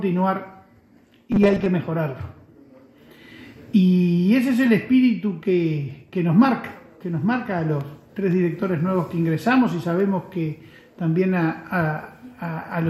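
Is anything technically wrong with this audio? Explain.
Yes, there's a short stretch of robotic sound from repeated short buffers, from 1.32 to 1.66 s. The audio suddenly turns into a rigid, metallic buzz pitched at 200 Hz. That's likely because new audio wasn't arriving fast enough, so playback kept looping a tiny 5 ms slice to fill the gaps, with about half the material repeated rather than real. That fixed loop length imposes a buzz at its own rate in that window.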